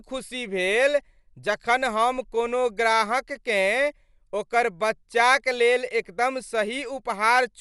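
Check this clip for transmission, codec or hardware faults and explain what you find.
There's one codec fault, running the whole way through this speech: likely Dolby Digital compression, starved at roughly 64 kbps, so nothing survives above 11.5 kHz, sounding dull with rough, fluttery noise-filled detail.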